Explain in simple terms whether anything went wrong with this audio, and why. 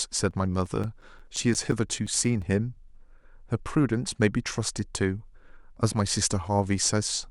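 Something did go wrong. From 0.31 to 2.59 seconds, the speech is broken by a quick run of fourteen tiny ticks, about six every second. These are CD scratch ticks. A scratch spoils the same spot on the disc each time it spins past. The player cannot rebuild the lost sound there, so it patches over it or goes briefly silent. Each gap is short, the longest about a hundredth of a second.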